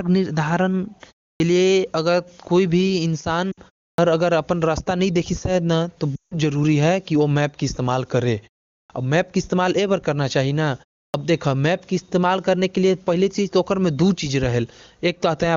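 Speech over an AMR-WB link shows two faults. In a clipped start after a pause, the output device sleeps through gaps of about 0.3 to 0.5 s and wakes late, so roughly 40 ms of onset is swallowed at 1.36, 3.94, 8.86 and 11.10 s, and speech jumps abruptly out of silence. Lost AMR speech frames make the decoder repeat the last good parameters with falling gain. A 60 ms loss at 3.51 s drops to near silence, and a 160 ms run at 6.16 s drops to near silence within two frames before returning weak or rough.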